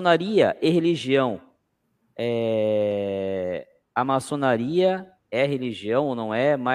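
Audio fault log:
Nothing to log here, since the speech comes through without a single technical fault anywhere in it.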